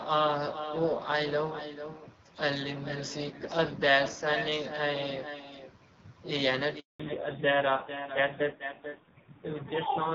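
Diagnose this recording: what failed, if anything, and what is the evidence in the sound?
Echo with no canceller, at the call-processing stage: the far end's loudspeaker feeds its microphone and nothing subtracts it. Throughout, every phrase of speech returns roughly 0.4 s later as a thinner copy about 10 dB below the original.

Handover gap, at the network stage: while the call switched links, no speech frames arrived. From 6.80 to 7.00 s the voice drops away and leaves 200 ms of silence, and whatever was said in that span is gone.

Fallback to narrowband, at the codec stage: after the handover the call left the HD Voice codec, which sounds clear with light damage up to that point. From 7.00 s to the end, nothing remains above 4 kHz, and the voice turns dull and rough, consistent with a low-rate AMR narrowband mode.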